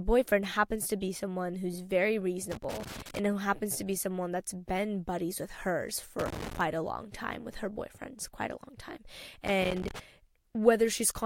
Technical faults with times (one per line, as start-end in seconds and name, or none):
2.52-3.19 loose connector crackle
6.19-6.61 loose connector crackle
9.47-9.99 loose connector crackle